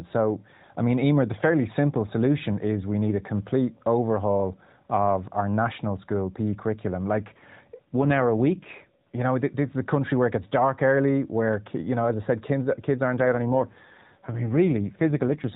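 From 7.84 to 9.22 s, after "curriculum like" and before "know this is a", and again from 13.2 s after "said kids kids aren't" to the end, the speech shows an AMR rate drop. The mobile codec, lightly coloured throughout, falls to a lower mode, which fits a step from 12.2 to 5.9 kbps, so the voice turns rougher and more synthetic. Unlike a bandwidth switch or a dropout, the band stays the same and there is no gap.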